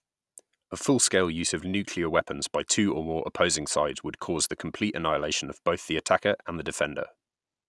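No technical faults can be heard anywhere in this recording.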